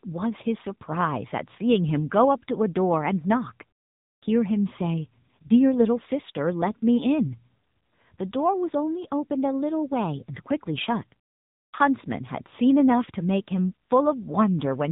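From start to finish the speech passes through the AMR narrowband mobile codec, and nothing above about 3.8 kHz survives. The vocal-tract model, driven by sparse pulses, gives a buzzy, synthetic edge that fits a low mode around 7.95 kbps. A plain telephone band-limit would only sound dull; here the voice itself is rebuilt and sounds artificial.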